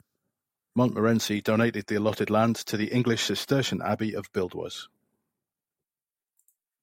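No faults are audible anywhere in this speech recording.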